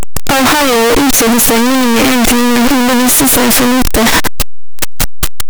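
From the start to the end of this speech, the sound is loud, harsh distortion. Quiet moments are as loud as everything else. The likely cause is signed and unsigned mixed up in 8-bit samples. Each zero crossing jumps across the full range.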